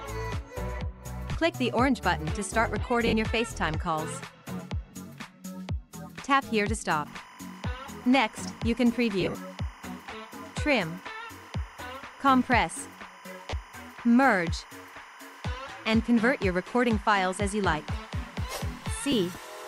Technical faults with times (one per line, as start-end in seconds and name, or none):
1.33-1.35 lost LE Audio frames
3.07-3.13 lost LE Audio frames
4.91-4.93 lost LE Audio frames
7.06-19.67 timecode bleed
9.21-9.35 lost LE Audio frames
13.50-13.53 lost LE Audio frames
19.12 lost LE Audio frames